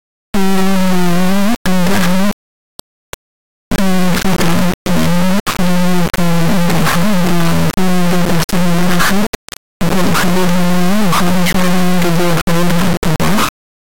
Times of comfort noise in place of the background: none

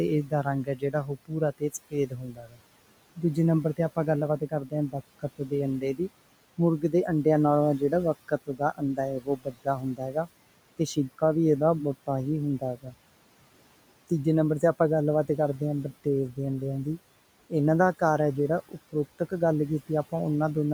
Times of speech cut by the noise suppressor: 0.25-2.60, 4.39-6.00, 8.28-10.28, 12.60-12.93, 18.69-19.32

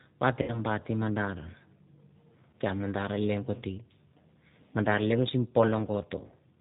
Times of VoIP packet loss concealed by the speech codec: 0.42-0.60, 2.51-2.54, 6.27-6.34

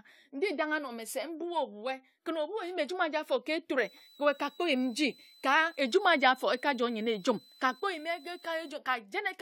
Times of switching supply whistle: 3.80-8.70

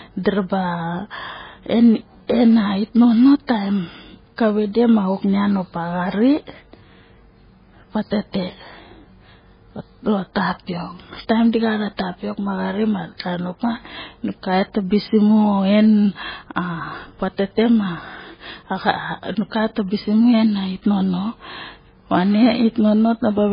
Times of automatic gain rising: none

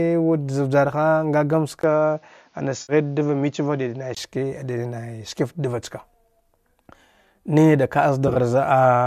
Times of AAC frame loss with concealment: 2.81-2.93, 8.28-8.37

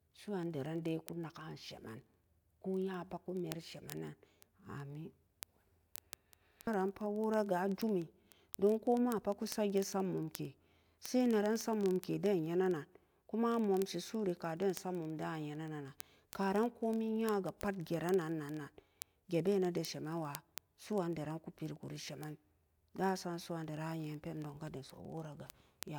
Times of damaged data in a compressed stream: none

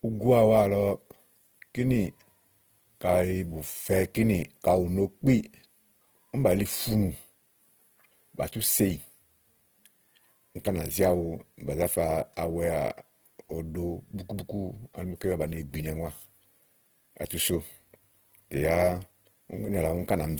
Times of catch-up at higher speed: none

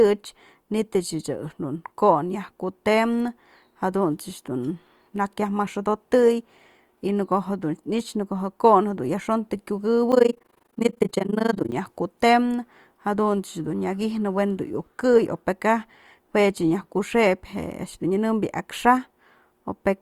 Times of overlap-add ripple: 10.12-11.75

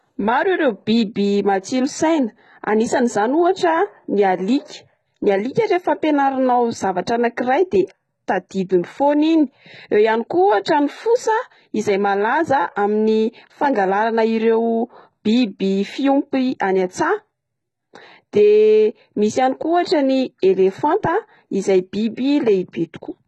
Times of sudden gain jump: none

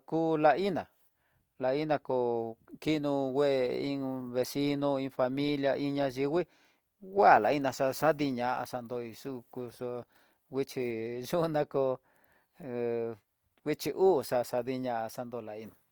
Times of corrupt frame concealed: none

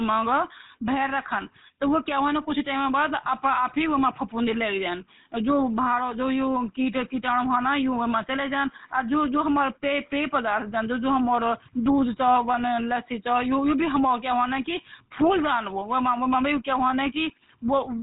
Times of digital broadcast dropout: none

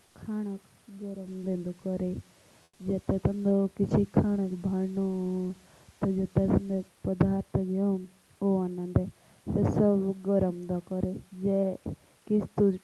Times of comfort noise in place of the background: 2.63-2.79

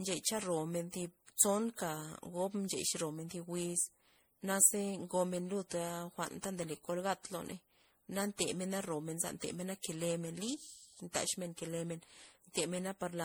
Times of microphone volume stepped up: none

